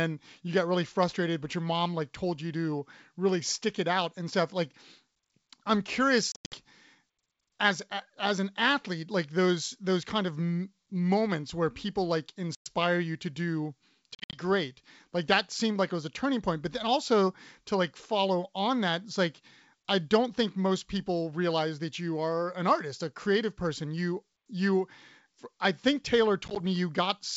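Packet loss on an ADPCM call cuts hard-edged silent holes into the speech at 6.32 to 6.56 s, 12.55 to 12.68 s, 14.15 to 14.40 s and 26.48 to 26.61 s. Several of these are broken up into shorter gaps. A plain dropout would resume cleanly, but here the decoder's predictor and step size have drifted, so each return comes back slightly distorted until it resynchronises. The G.722 wideband coding carrying the call stays clear around the gaps.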